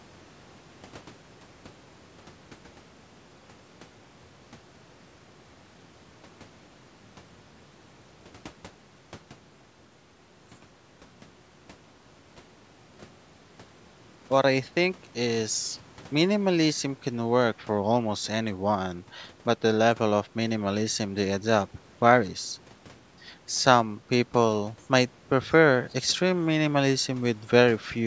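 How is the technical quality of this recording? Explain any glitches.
No glitches or faults heard.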